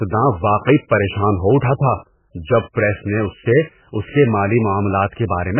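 Speech with hard clipping throughout. The peaks were driven about 5 dB past the limit, cutting around one percent of samples flat and adding crackle. Heavy codec damage also runs the whole way through, and nothing remains above 3 kHz. The likely cause is MP3 compression at a very low bitrate, near 8 kbps, which leaves the sound watery and smears attacks.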